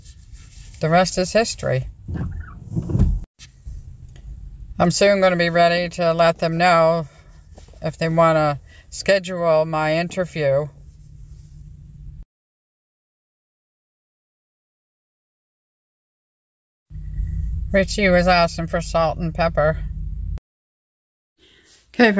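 No technical faults can be heard anywhere in this audio.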